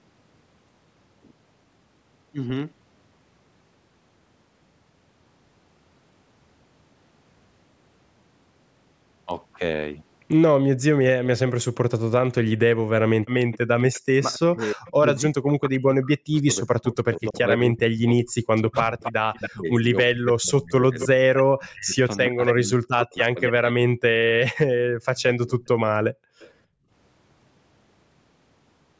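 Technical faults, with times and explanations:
13.52–14.91 s, 19.03–20.04 s, 21.0–23.52 s, 25.18–26.5 s, echo leak: a delayed copy of the speech trails by 319 ms, then 274 ms, ranging from faint to nearly as loud as the talker. It's likely a speakerphone whose echo canceller let some through.
13.88–25.59 s, speech suppressed in double talk: the speech dips and chops for about seven seconds in total, at worst by roughly 40 dB. Likely the canceller ducked everything while both sides talked.
26.12–26.9 s, background gated by the echo canceller: the room sound drops by about 38 dB for roughly half a second as the canceller clamps the mic while the far end plays, then it comes back.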